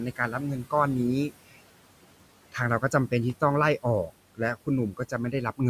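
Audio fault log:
Throughout: noise suppressor artifacts. The background sinks between phrases and swells back under the speech. The suppressor is pulling down bands it judges to be steady noise by about 18 dB, frame by frame, against room noise sitting about 17 dB below the speech.
0.16–0.41 s, 1.29–1.62 s, 4.92–5.13 s: speech cut by the noise suppressor. Parts of the speech sound swallowed or faint, the quiet edges of sounds fading along with the background. The suppressor mistook these low-level portions for noise and ducked them by up to about 13, 18 and 11 dB respectively, over roughly a tenth to a fifth of a second each.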